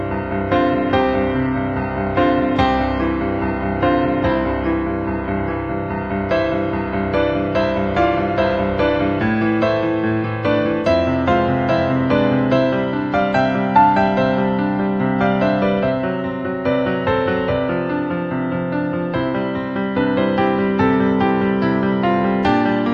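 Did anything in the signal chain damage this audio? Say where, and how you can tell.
Yes, at the streaming stage. From 0.0 to 6.0 s you're hearing an adaptive stream starting at a low bitrate: the top end is thin and partly synthetic, with heavier codec smearing, which points to something like HE-AAC around 16 kbit/s. At 6.0 s the quality jumps up with no gap, consistent with AAC-LC near 96 kbit/s. The player grabbed a cheap rendition to start fast, then switched once it had measured the connection.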